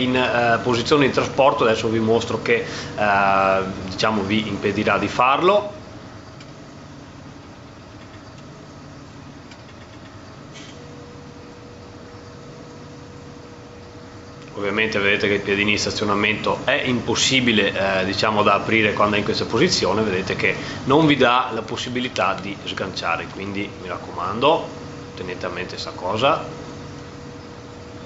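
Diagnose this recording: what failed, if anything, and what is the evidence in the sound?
Gain pumping runs throughout. The gain swings by about 10 dB. Loud and soft parts end up squashed together. The likely cause is microphone gain set far too high, clamped by a fast limiter.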